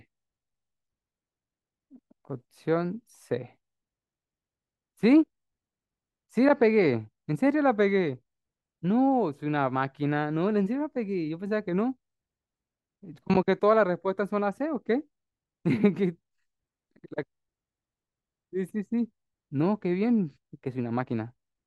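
Speech recording with no audible technical faults anywhere in the clip.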